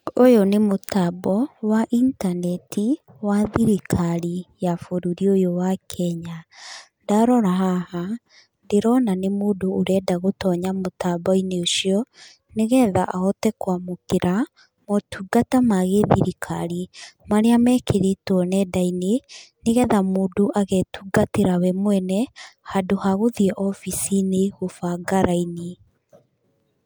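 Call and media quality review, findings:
No audible faults found in this speech recording.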